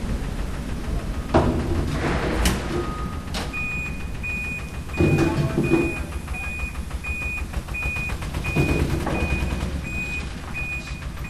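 From 9.04 s to the end, the sound picks up crude rate conversion: samples were resampled by straight linear interpolation with no anti-imaging filter, which fits a change from 32 kHz to 44.1 kHz. The interpolation error repeats in a pattern set by that ratio, producing a gritty, inharmonic fizz roughly 30 dB below the signal that rises and falls with loud and bright material. Unlike clipping distortion, it appears at moderate levels and its tones bear no harmonic relation to the source.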